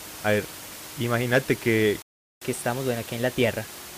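A playback stall in this speech recording, likely from the player running out of data or a blocked thread, cuts the sound to silence from 2.02 to 2.42 s, about 0.39 s. The player then performs a catch-up at higher speed, resampling its backlog at 1.15 times normal from 2.42 s to the end, so the speech runs faster and sits about two semitones higher, with the room noise still audible roughly 15 dB beneath it.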